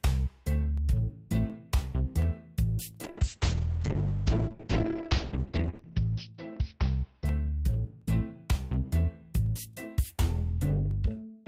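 From 0.78 s to the end of the clip, a click recurs every 0.72 s whenever there is signal. This regular spacing points to clock drift buffer slips: two devices are likely running on separate clocks that disagree by roughly a thousand parts per million. The buffer between them gradually drifts until a short block, a few tens of samples, is dropped or repeated, producing a discontinuity at each slip.

From 3.05 s to 7.81 s a call bitrate drop is audible. The encoder's rate falls from 40 kbps to 7 kbps and stays at its lowest for about 2.9 s. At that rate the coding becomes coarse and the audio band narrows from 20 kHz to 6 kHz. The result is a rough, watery and muffled sound that lacks top end until the bitrate recovers near 7.8 s.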